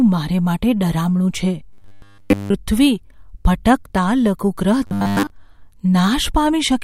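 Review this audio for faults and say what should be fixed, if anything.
Robotic sound from repeated short buffers at 1.73–2.54 s and 4.87–5.30 s. The speech becomes a rigid 100 Hz buzz, fully in the first span and mostly in the second. This is likely a 10 ms buffer replayed while fresh audio was late. Enlarge or stabilise input buffering to prevent it.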